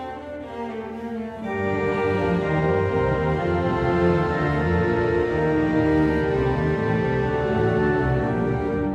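Music clip, no audible faults.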